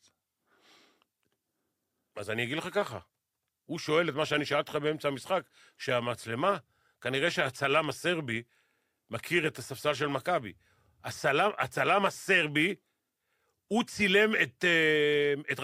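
No fault can be heard anywhere in this speech recording.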